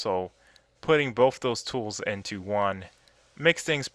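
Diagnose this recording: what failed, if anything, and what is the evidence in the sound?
Nothing failed here; no stage of the chain, from analogue input through conversion, buffering, processing, coding, transport and storage to playback, leaves a trace in the sound. There is no evidence to cite, because nothing disturbs the audio at any point.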